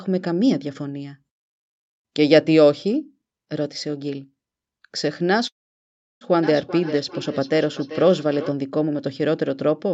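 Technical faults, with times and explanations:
5.47–6.24 s, call audio freeze: after a brief fading tail the sound drops to about 0.7 s of silence, then resumes exactly where it stopped with nothing lost, likely because delayed packets emptied the jitter buffer. The waveform shows a flat gap, and the spectrogram a blank vertical band.
6.43–8.55 s, feedback echo between two devices: each stretch of speech returns roughly every 0.4 s, thinner and more ringing, peaking at about 13 dB below the speech, because one device replays another's microphone in the same room. The spectrogram shows faint, evenly spaced, smeared copies trailing each syllable.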